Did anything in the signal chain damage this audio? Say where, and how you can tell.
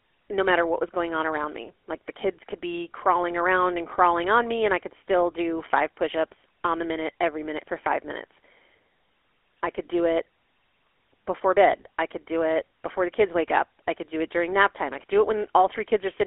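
Yes. A GSM full-rate codec, the codec stage, is audible throughout the speech. The band is confined to roughly 300 Hz to 3.4 kHz, and a buzzy, gravelly roughness rides on every voiced sound. This comes from a vocal-tract model driven by a sparse, regularly spaced pulse excitation, which fits a 13 kbps full-rate encoding.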